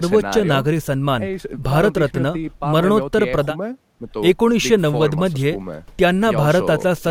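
No technical faults occur at any point in this speech, so there is nothing to describe in time order.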